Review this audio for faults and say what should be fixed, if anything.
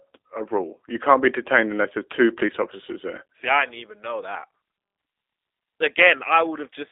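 Throughout the speech, G.729 codec damage is plainly audible. The voice is confined to a 250 Hz to 3.6 kHz telephone band and sounds rough and slightly synthetic. That fits an 8 kbit/s G.729-type codec rebuilding the speech from a vocal tract filter, a pitch estimate and a few pulses per 10 ms frame. On a spectrogram, the energy stops sharply near 3.6 kHz with nothing below 250 Hz, and the harmonics look smeared rather than cleanly striated. To prevent it, capture or route the audio over a wideband, higher-bitrate path instead of a narrowband G.729 link.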